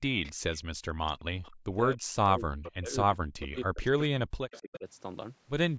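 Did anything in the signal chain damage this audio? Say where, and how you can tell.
Yes, the damage happens at the call-processing stage, in the echo canceller on the loudspeaker side. An echo leak shows up at 0.23–0.33 s, 0.55–0.59 s, 1.43–1.51 s and 4.51–4.79 s: a faint, delayed copy of the speech trailing it by 263 ms, at about 20 to 30 dB below the direct voice. The constant delay points to a loudspeaker-to-microphone path, most likely a canceller that had not fully converged, passing residual echo back.

Background gated by the echo canceller appears at 1.52–1.65 s, right after the third echo fragment. The room tone drops by about 40 dB for roughly 150 ms, then comes back. This is the canceller's suppressor clamping the microphone while it judges the loudspeaker to be active. The noise floor vanishing and returning, with no change in source, marks it as gating rather than a real pause.

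Speech suppressed in double talk occurs at 1.96–2.17 s, across a long stretch from 2.37 to 4.44 s, and again at 4.61–4.86 s, overlapping the last echo. The voice dips, by around 40 dB in the first two spans and about 20 dB in the last. The likely cause is the canceller treating simultaneous talk as echo and attenuating the near talker with it. The band limit at 8 kHz is ordinary call microphone processing.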